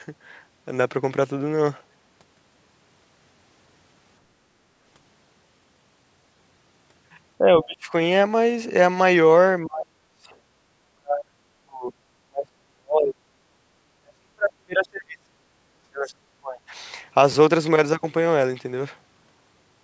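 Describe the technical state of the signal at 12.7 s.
At 12.7 s the speech is being pushed down, likely speech suppressed in double talk: with both sides active, the echo canceller turned its own talker down from 12.25 to 13.29 s, by roughly 40 dB. The waveform shrinks to a thin line and the spectrogram nearly empties.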